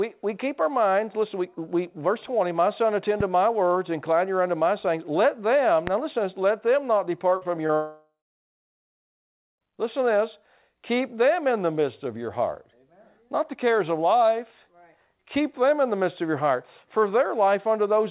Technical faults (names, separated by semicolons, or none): loud pop; repeated packet loss (robotic sound); long network dropout